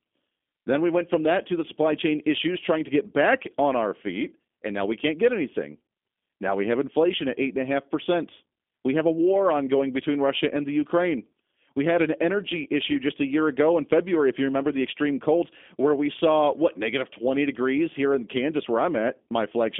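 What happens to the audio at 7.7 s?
At 7.7 s the speech is still passing through the G.729 codec, a fault that runs through the whole clip. The codec rebuilds the voice from a modelled vocal tract, a pitch predictor and a few pulses per frame. The damage is plainly audible, with a rough, synthetic edge, which fits an 8 kbit/s codec. The line band runs from 250 Hz to 3.5 kHz. Nothing above 3.6 kHz survives.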